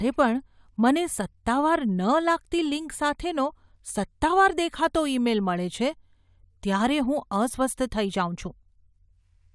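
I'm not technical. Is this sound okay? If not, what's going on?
Yes, nothing audible in this speech recording points to a technical fault.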